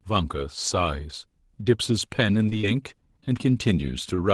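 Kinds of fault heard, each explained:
Repeated packet loss (robotic sound): From 2.49 to 3.26 s, four short holes open up in quick succession, the longest about 19 ms. Each is patched by extending the sound just before it. About 60 ms goes missing, giving a choppy stretch.
Short stall from a late packet: At 4.16 s one packet arrives late and the jitter buffer runs dry. The receiver holds the last sound for about 22 ms, then resumes where it left off. Nothing is lost, but the sound briefly drags.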